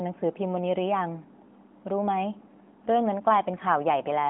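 Speech over an AMR narrowband mobile codec, confined to roughly 200 Hz to 3.5 kHz, with the light synthetic edge that fits the 12.2 kbps mode, and no technical faults.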